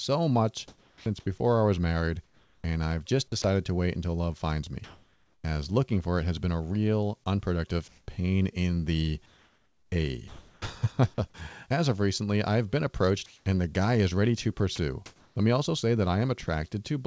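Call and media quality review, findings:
Sound chopped by the voice detector, 0.68–3.44 s, ending just before "to wait until love": holes in the sound. Likely sender VAD toggling repeatedly, about 0.84 s in total filled with RFC 3389 comfort noise.

Comfort noise in place of the background, 4.84–5.44 s, between "wait until love finds" and "as looking for it": real room tone swapped for flat, featureless hiss, level shifted about 4 dB, background sitting about 40 dB below loud passages. Likely DTX pause with receiver-generated noise, the full 0.6 s.

Same symptom, 7.88–10.62 s: detail drops out for about 1.2 s of that span, steady hiss instead. Likely comfort noise during DTX.

Same symptom, 13.26–15.36 s, starting after "recently I've been approached": roughly half a second of synthetic background within the stretch. Likely comfort noise during DTX.

Sound dropped by the voice detector, 14.76 s: brief 20 ms gap, sound replaced by steady noise, then back. 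Likely VAD misreading a quiet fragment as background, with comfort noise substituted. Band-limited call path throughout, nothing above 8 kHz, consistent with G.722.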